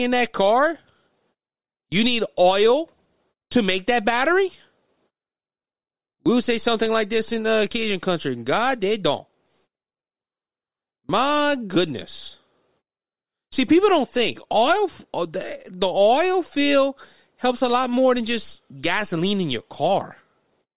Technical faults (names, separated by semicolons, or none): none